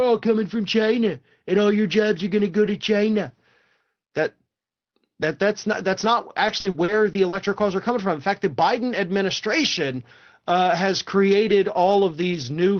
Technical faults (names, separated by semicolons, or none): repeated packet loss (robotic sound)